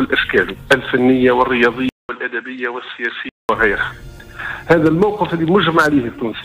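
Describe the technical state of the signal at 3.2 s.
At 3.2 s the signal sits inside a degraded stretch from 1.89 to 3.49 s, likely an input switched to a poorer device. It follows a 200 ms silence, drops roughly 10 dB, carries nothing above 8 kHz so it sounds dull, and adds a faint new noise floor.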